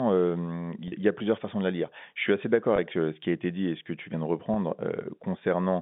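At 0.88 to 0.92 s, 2.76 to 2.78 s and 4.54 to 4.56 s the speech shows packet loss with pitch repetition. About 40 ms goes missing at the first point, which fits two 20 ms packets, and about 20 ms at each of the others. The receiver filled each gap by looping the last pitch period, so each one sounds like a brief held, buzzy sustain rather than silence, heard over the narrowband G.711 telephone line.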